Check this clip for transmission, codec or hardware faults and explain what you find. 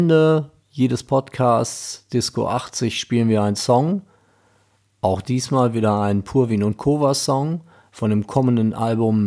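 No faults can be heard.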